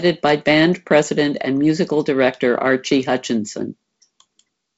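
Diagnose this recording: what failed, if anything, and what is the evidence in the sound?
Nothing failed in this recording, and there is no fault to diagnose at any stage. The speech has passed through G.722 wideband telephone coding, which shows as nothing above about 7.7 kHz and the light, slightly grainy texture that fits coding at 48 kbit/s.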